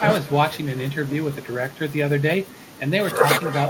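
Echo with no canceller runs throughout: the far end's loudspeaker feeds its microphone, returning the speech roughly a fifth of a second later, about 14 dB quieter and thinner.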